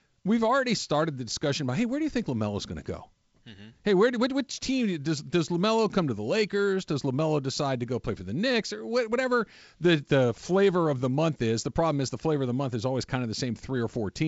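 No technical faults are audible in this speech.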